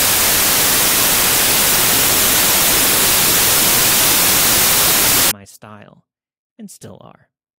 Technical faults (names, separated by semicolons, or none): samples built from the wrong bytes